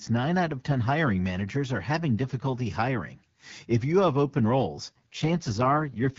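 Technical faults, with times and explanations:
4.85 to 6.18 s, AMR rate drop: for the last stretch the voice turns rough, raspy and more synthetic, which points to the wideband AMR codec falling from about 12.65 kbit/s to its lowest rate near 6.6 kbit/s. The codec sacrifices detail for error protection on a weak link. On a spectrogram the bandwidth stays the same, but harmonics become smeared and grainy. The waveform shows no gap or level step.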